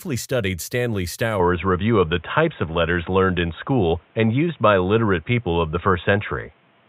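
At 1.4 s the speech abruptly turns dull and boxy to the end, likely an input switched to a poorer device; the spectrogram shows nothing above 3.8 kHz.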